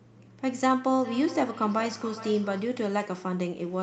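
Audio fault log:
0.96–2.81 s feedback echo between two devices: speech recurs roughly every 400 ms, about 15 dB down, as a second device replays it into the microphone.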